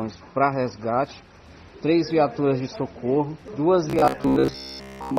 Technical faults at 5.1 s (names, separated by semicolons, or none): robotic sound from repeated short buffers